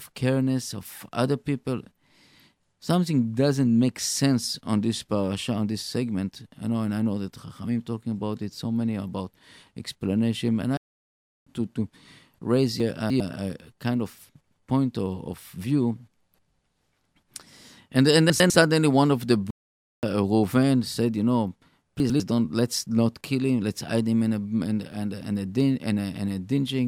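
Speech recording with two kinds of playback fault. Playback stalls cut the sound to silence from 10.77 to 11.47 s (0.69 s) and from 19.51 to 20.03 s (0.52 s), just after "one of the". In each case the audio stops mid-flow and then resumes. The likely cause is the player running short of data or its thread being blocked. Chunks out of order appear at 12.8 to 13.2 s after "to to raise", at 18.3 to 18.5 s between "and and" and "one of the", and at 22.0 to 22.2 s. In each, a 100 ms block plays late, by three chunks in the first case and by one in the others. This produces a jumbled moment with hard joins.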